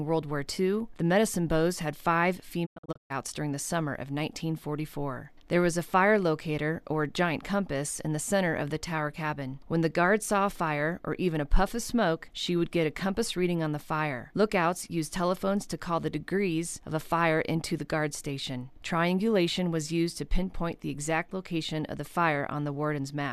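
From 2.65 to 3.12 s, a digital broadcast dropout leaves short silent holes. The receiver muted failed frames. The longest gap lasts 120 ms.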